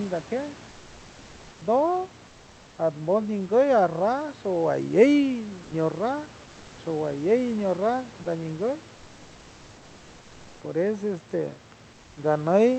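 At 5.63 to 5.71 s and 8.23 to 8.25 s, the sender's voice detector likely mistook part of the speech for background and stopped sending: sound dropped by the voice detector. Speech briefly gives way to comfort noise, for 80 ms and then 20 ms.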